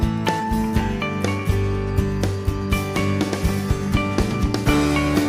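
Nothing stood out on listening to this clip.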